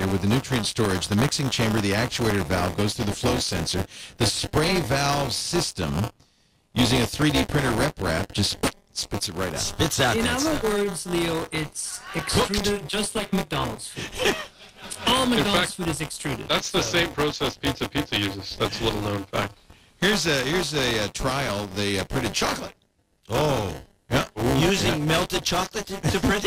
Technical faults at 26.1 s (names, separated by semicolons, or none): buffer tearing